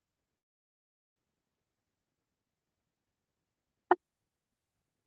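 From 0.38 to 1.20 s the speech cuts out, leaving about 0.8 s of silence before resuming slightly further on. The likely cause is a long network dropout: audio stopped arriving, leaving nothing to play. The waveform runs flat and the spectrogram shows an empty vertical gap.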